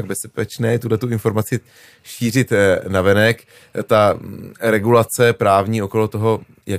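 No faults are audible anywhere in this speech recording.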